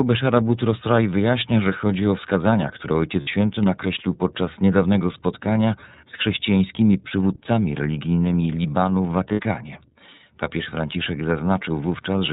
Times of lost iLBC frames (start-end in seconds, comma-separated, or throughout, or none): 3.21-3.28, 9.32-9.40